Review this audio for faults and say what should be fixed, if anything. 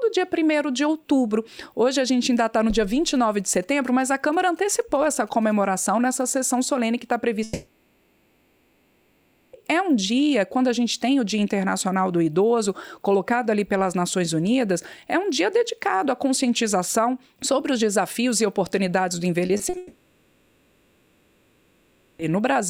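From 2.92 to 5.53 s there are GSM signalling bursts: a nearby 2G phone's radio pulses get rectified into a galloping tick-and-buzz at about 217 Hz, roughly 30 dB below the audio. Keep phones away from the rig or switch them off.

There are two long network dropouts, from 7.43 to 9.55 s (2.1 s) and from 19.77 to 22.21 s (2.4 s). The receiver bridges each gap with a fading continuation of the last sound instead of silence, and that stretch of audio is simply gone. The likely cause is network trouble. A steadier connection, or a bigger jitter buffer, would prevent them.

Short concealed packet loss shows up at 19.47 s (20 ms), 19.57 s (20 ms) and 19.69 s (40 ms). Each one is a brief smear or wobble where the decoder guessed at the missing audio. The cluster runs straight into the second dropout. Fixing the network path should clear these too.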